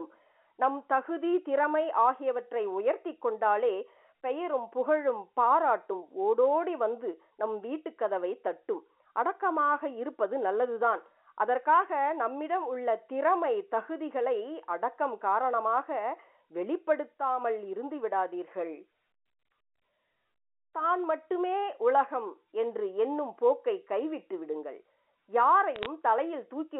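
A speech clip carried over a G.711 telephone line, band-limited to roughly 300 Hz to 3.4 kHz. From 25.76 to 25.86 s, bit errors on the digital phone line produce a short burst of sharp ticks and crackle. Each flipped bit corrupts a single sample, with an error rate of a small fraction of a percent. On a waveform these show as isolated one-sample spikes jutting out of the speech, and on a spectrogram as thin vertical lines spanning the whole band.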